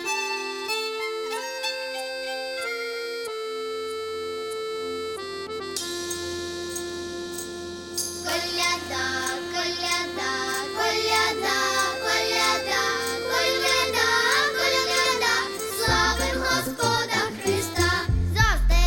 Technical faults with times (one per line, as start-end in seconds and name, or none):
none